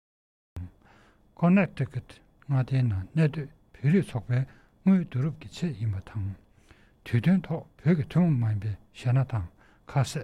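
A cut-off start runs from 0.0 to about 0.57 s. The opening half-second is silence, and at 0.57 s the sound appears already in progress, with no attack or fade-in leading up to it. Capture evidently began late, so whatever was happening before that moment never reached the recording, and the audio jumps from nothing straight into the middle of an ongoing sound.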